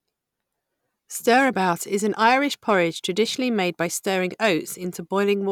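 From 2.70 to 2.81 s, just before "traditionally made by stirring", hard clipping: peaks exceed a stage's limit by about 1 dB and are cut flat, adding a brief crackle.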